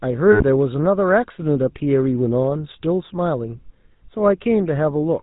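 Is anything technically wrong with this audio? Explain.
Yes, there are two faults. Throughout, the speech is coded with the GSM full-rate codec, and the damage is plainly audible. The codec models the vocal tract and excites it with regularly spaced pulses, keeping only every third excitation sample, which fits a 13 kbps stream. Nothing above 4 kHz survives, leaving the voice buzzy and gravelly.

From 0.32 to 0.43 s there are lost GSM frames, roughly 80 ms of missing data. The decoder fills the gap by repeating the last good frame's settings, so the sound freezes into a brief rough, metallic ring instead of continuing normally.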